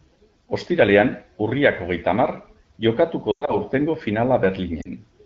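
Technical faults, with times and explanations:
3.31–3.56 s, lost AMR speech frames: the speech drops to near silence within two frames during losses scattered across about 160 ms, then returns briefly weak and rough. Radio errors corrupted frames, which fits roughly six lost 20 ms frames with a longest gap of 100 ms, so the AMR-WB decoder repeated its last good pitch and vocal tract settings with falling gain.
4.81–4.89 s, lost AMR speech frames: a brief drop toward near silence lasting 40 ms, which fits two concealed frames.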